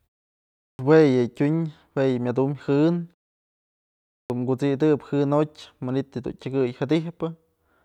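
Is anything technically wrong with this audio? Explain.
Yes. Clipped start after a pause at 0.65 s and 4.14 s: the output device wakes slowly from silence, swallowing about 140 ms and 160 ms, so speech begins abruptly without its first sounds.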